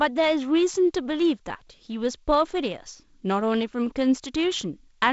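Nothing stood out on listening to this speech recording, which carries G.722 wideband telephone coding.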